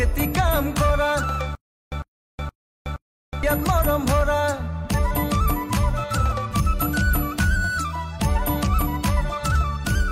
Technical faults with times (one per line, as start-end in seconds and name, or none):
1.55-3.43 stutter with silent gaps